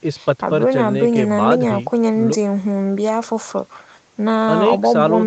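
No technical faults can be heard in this speech.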